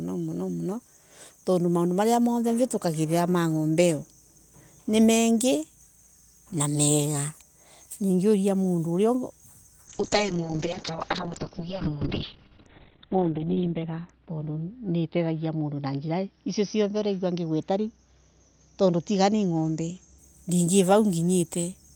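From 9.88 s to 20.24 s the speech turns rough and watery and loses its top end, with the brightness narrowing from a full 20 kHz band to about 4 kHz. The worst stretch lasts about 3.7 s. This is a call bitrate drop. The estimated bandwidth fell, so the encoder coded the audio far more coarsely and cut off the high frequencies, consistent with a fall from around 40 kbps to 8 kbps before it recovered.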